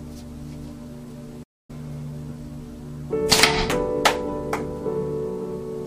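At 1.43 s there's a playback stall: the sound drops to silence for about 257 ms, until 1.70 s, likely the player starving for data, then carries on.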